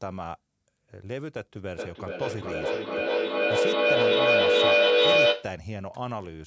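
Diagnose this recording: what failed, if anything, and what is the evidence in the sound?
What failed is a feedback echo between two devices, an acoustic loop at the call-processing stage. From 1.74 s to 5.6 s the speech keeps coming back at a steady interval of roughly 400 ms, each pass thinner and more ringing. The repeats pile up instead of fading, peaking about 13 dB above the speech. A second device in the room is replaying this microphone's signal, and this end's echo canceller can't remove what it didn't play. The band stops at 8 kHz.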